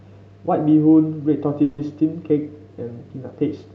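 A speech recording carried over a call path, with a call audio freeze from 1.63 to 1.81 s. For about 150 ms the last sound is drawn out as a fading buzz or hiss, which most likely means packets were held up and the jitter buffer ran dry. Unlike a dropout or packet loss, the speech then resumes exactly where it stopped, with nothing skipped, and everything after arrives about 150 ms later. The audio has the Opus codec's usual coding noise and no content above roughly 8 kHz.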